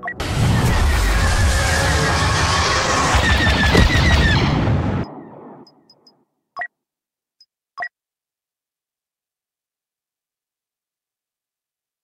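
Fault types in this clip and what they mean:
No faults can be heard.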